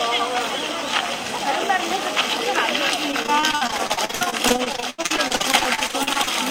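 From 3.11 s to 6.31 s the audio shows repeated packet loss, producing the familiar robotic sound. Dozens of short dropouts arrive in quick succession, the longest about 82 ms. The receiver patches each hole by extending the preceding sound, covering roughly a third of the span, about 1.04 s. A further 1.06 s is simply absent. The result is choppy audio with audible holes, stuttering until just before the end.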